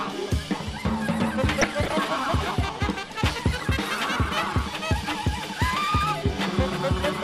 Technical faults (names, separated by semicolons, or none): MP2 compression; DAB burbling